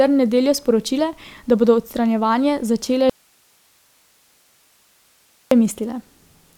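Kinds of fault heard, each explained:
Audio dropout to a faint residue: the speech cuts out abruptly at 3.10 s and returns at 5.51 s, leaving about 2.4 s of plain hiss around 40 dB below the speech level, likely because the signal was lost upstream while the path after the break stayed live.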